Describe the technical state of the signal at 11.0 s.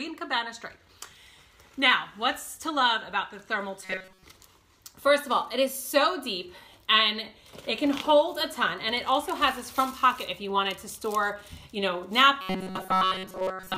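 At 11.0 s the signal is intact, with no dropout, distortion or other fault audible at that point.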